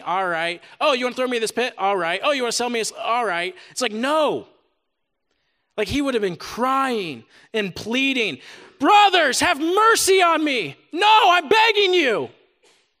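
No technical faults can be heard anywhere here.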